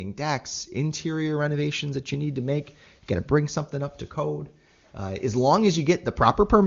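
No technical faults can be heard in this speech, which comes through the AMR wideband (HD Voice) codec with at most faint coding damage, consistent with its top 23.85 kbit/s mode, and with no content above 7.3 kHz.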